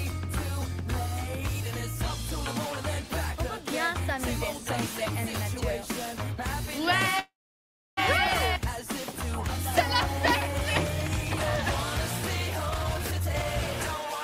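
From 7.19 to 7.99 s there is a call audio freeze, likely caused by held-up packets draining the jitter buffer. The receiver stretches the last sound into a fading buzz or hiss, then about 0.66 s of silence, before the audio resumes where it stopped, with nothing lost.

From 12.66 to 13.99 s a jitter buffer speed-up occurs: with excess audio queued, the receiver repeatedly trims pitch-period-sized slices, removing around 0.7 s in total. The sound plays at 148% speed with unchanged pitch, giving a hurried, rushed quality.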